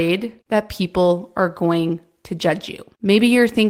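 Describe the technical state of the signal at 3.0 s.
At 3.0 s the speech signal is intact, with no audible fault at that moment.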